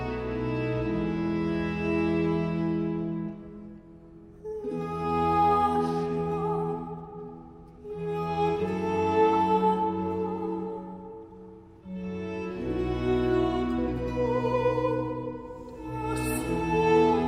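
No technical faults can be heard anywhere in the recording, and the signal holds steady throughout.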